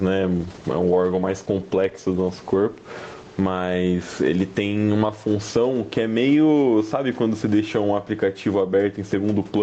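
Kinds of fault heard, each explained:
gain pumping: Throughout, the level ducks by about 15 dB under each loud syllable, likely from input gain set far too high with a fast limiter clamping it. Unlike a noise gate, it pulls the gain down on loud sounds rather than cutting out quiet ones.
call bitrate drop: From 0.36 to 4.53 s the Opus stream falls from 32 to 14 kbps and stays at its lowest for about 3.4 s, so the speech turns rough and watery before clearing. Unlike packet loss, nothing drops out or repeats; the coding simply coarsens.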